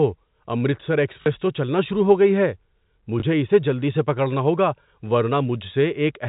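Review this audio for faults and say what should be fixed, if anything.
Packet loss with last packet repeated, at 1.22–1.26 s and 3.20–3.22 s: missing audio was filled by replaying the previous chunk, giving a short robotic stutter at the first and a small blip at the second, which fits 20 ms packets. To prevent it, use a jitter buffer with proper loss concealment and improve network reliability.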